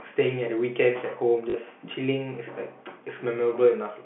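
Speech carried over a G.711 telephone line, limited to roughly 150 Hz to 3.4 kHz, with one fault: packet loss with last packet repeated from 1.50 to 1.54 s. About 40 ms of audio is missing, and the receiver fills the gap by replaying the previous packet. The replayed audio gives the passage a brief robotic stutter. The 40 ms span fits two lost 20 ms packets.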